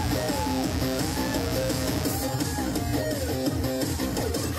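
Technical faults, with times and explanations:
0.00–2.04 s, mains buzz: switching spikes from a dimmer, rectifier or unshielded path leak into the signal twice per 60 Hz cycle, stacking harmonics up into the kilohertz range, so a harsh, raspy buzz sits roughly 10 dB below the sound before cutting out.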